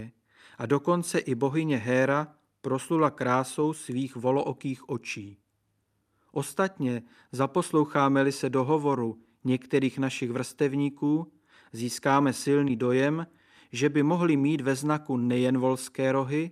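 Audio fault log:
No fault is heard in this speech clip.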